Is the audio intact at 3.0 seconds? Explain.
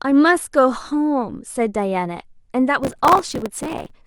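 No. At 3.0 seconds the speech sits inside a burst of processor overload crackle running from about 2.84 to 3.91 s. The processor misses buffer deadlines repeatedly, on the order of 3 ms buffers, and each miss replays a scrap of old audio with hard edges. That gives a gritty tearing over the speech. A waveform shows dense step discontinuities, and a spectrogram shows a haze of vertical broadband streaks.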